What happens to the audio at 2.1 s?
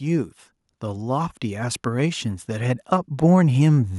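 At 2.1 s the speech sits inside automatic gain rising, running from 0.05 to 3.95 s: the gain control lifts its gain gradually by about 8 dB, swelling voice and background together.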